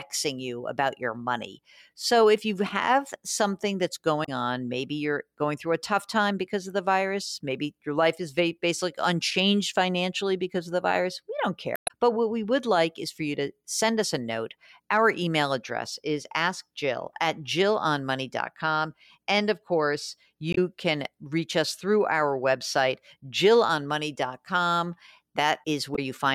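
Four brief glitches come from damaged data in a compressed stream: 4.22–4.29 s after "you have something that's", 11.74–11.91 s after "the virus we don't", 20.51–20.58 s after "of course", and 25.92–25.99 s. Each time, the decoder hits corrupt bytes, loses frame sync and hunts for the next header.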